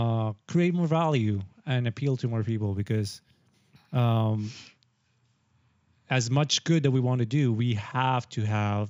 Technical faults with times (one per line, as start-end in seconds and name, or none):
2.65-4.32 imaging from linear upsampling